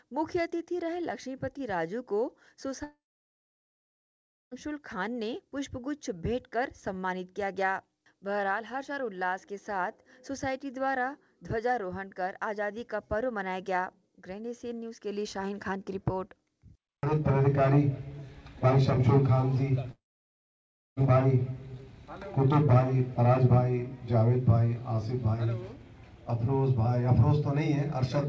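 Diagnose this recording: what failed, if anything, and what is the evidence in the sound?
The network stage failed twice, most likely as a long network dropout in which packets stopped arriving altogether. From 2.84 to 4.53 s, and again from 19.91 to 20.98 s, the receiver stretches the last sound into a brief fading buzz, roughly a tenth of a second, then leaves silence of about 1.5 s and about 1 s. The audio then resumes with the missing 1.68 s and 1.06 s simply gone. Throughout, the call codec path caps the sound at 8 kHz, consistent with G.722.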